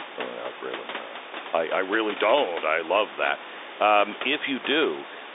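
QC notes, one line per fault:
The speech sits within a telephone band of roughly 300 Hz to 3.7 kHz from G.711 mu-law coding at 64 kbps, with steady room noise about 16 dB below it and no technical faults to report.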